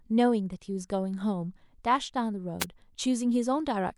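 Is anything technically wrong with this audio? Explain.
Yes, there's one problem. From about 2.60 to 2.65 s there's a wireless microphone noise hit, a quick burst of static lasting roughly 50 ms. It's the classic analogue FM radio mic fade: reflected copies of the transmitter signal arrive out of phase and momentarily cancel at the receiver, so the received level drops and the receiver's own noise jumps up. You get that short swish instead of clean audio.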